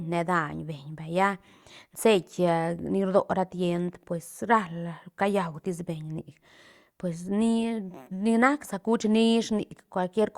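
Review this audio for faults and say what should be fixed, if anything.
No faults turned up in this audio, so nothing needs to be fixed.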